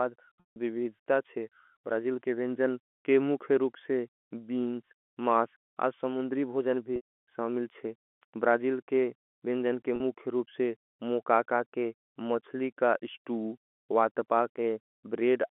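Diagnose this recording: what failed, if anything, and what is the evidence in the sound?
Packet loss with pitch repetition, a network-stage fault, appears at 0.40 to 0.56 s, 6.96 to 7.02 s and 9.96 to 10.00 s. Each gap is bridged by the receiver looping the last pitch period, which gives a brief held, buzzy tone that fades out over about 50 ms, into silence on the longer gaps. The concealed spans come to about 160 ms, 120 ms and 40 ms, which fits runs of lost 20 ms packets. The concealment rides on a G.711 telephone band of 250 Hz to 3.4 kHz.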